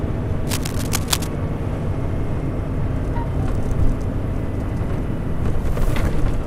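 Cable scratch noise runs from 0.46 to 1.27 s, most likely from a worn cable, connector or control being moved while the signal passed through it. As the contact shifts, its resistance jumps erratically, and each jump injects a ragged burst of noise into the audio. Here those bursts sit only slightly below the sound itself, so for nearly a second a dense, uneven scratching and rustling rides prominently over everything else.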